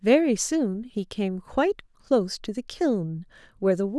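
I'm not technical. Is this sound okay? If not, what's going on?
Yes, no technical faults can be heard in this speech recording.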